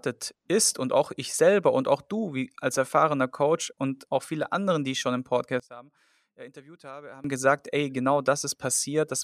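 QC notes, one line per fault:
5.60–7.24 s, one channel inverted: right after "die ich schon im" the speech suddenly drops by about 21 dB and turns faint, with the centred voice nearly gone, until it recovers at "gesagt ey genau". The likely cause is one stereo channel flipped in polarity, so the centred voice common to both sides cancels when summed to mono, leaving only the faint difference between the channels.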